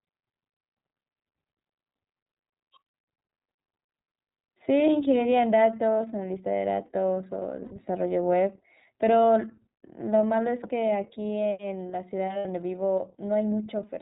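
Speech coded throughout with the iLBC codec: nothing above 4 kHz survives, and the voice has a plainly audible rough, synthetic edge. The character points to the 30 ms frame mode at about 13.3 kbps, where each frame's excitation is coded independently of the previous one. There are two sets of lost iLBC frames, at 7.64–7.71 s and 12.39–12.46 s, each roughly 60 ms long. In both, the decoder fills the gap by repeating the last pitch cycle blended with noise, giving a brief held, buzzy vowel. Because iLBC frames stand alone, normal decoding resumes almost immediately afterwards.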